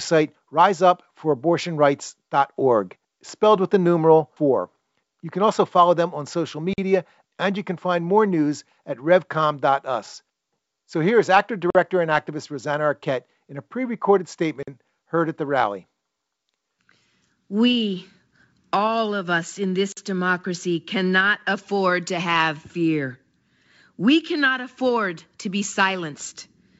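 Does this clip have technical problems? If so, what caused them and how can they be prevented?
Yes. Four times in this speech, at 6.73, 11.70, 14.63 and 19.92 s, the audio path failed to deliver a block of samples, which fits a 2048-sample buffer, and a block of digital silence went out instead. Each gap lasts about 46 ms, so the sound drops abruptly to nothing and back, heard as a short hole. Giving the audio thread more buffer headroom or higher scheduling priority prevents this.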